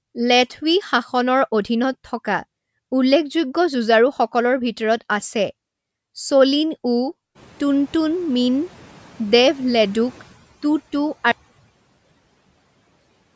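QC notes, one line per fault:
7.35 to 10.25 s, noise suppressor catching up: the room noise jumps by about 23 dB right around 7.5 s, and for the next few seconds it comes through with less reduction than it should. The suppressor's noise estimate is still tuned to the quieter room, so it doesn't cut much at first. Over roughly 2.9 s the estimate catches up and the noise sinks by about 7 dB, so you hear it swell, then gradually settle.
11.32 s to the end, audio dropout to a faint residue: the speech cuts off abruptly mid-flow and never returns. What's left is just a thin hiss, something like 50 dB below where the speech sat, so the path after the break is clearly still live. That hard edge into near-silence doesn't sound like a pause or a fade-out. The likely cause is the signal getting lost upstream while the rest of the chain kept running.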